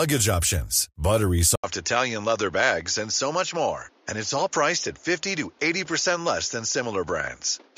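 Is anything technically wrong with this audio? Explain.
Yes. At 1.56 s, just after "options buttery", the sound changes character and stays that way to the end. There is a gap of about 80 ms, then the audio returns duller and boxier. Nothing remains above 7.1 kHz, the level falls by around 5 dB, and a new noise floor sits roughly 35 dB below the signal. This is likely an input switched to a poorer device, a narrower-band microphone with its own tone and noise.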